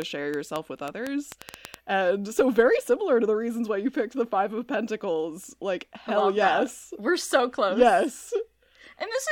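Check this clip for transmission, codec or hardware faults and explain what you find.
One fault is present, a train of clicks from 0.02 to 1.75 s. Around ten similar pulses arrive unevenly, about 5.8 per second, standing well above the speech. Likely interference or a struggling interface injecting pulses, heard as ticking, and seen as thin vertical spikes across all frequencies.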